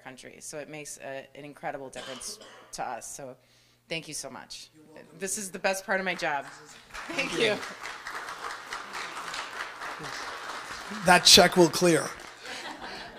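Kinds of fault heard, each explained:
Train of clicks: likely interference or a faulty connection injecting repeated pulses, heard as about fifteen unevenly spaced ticks, around 8 per second, from 10.64 to 12.26 s.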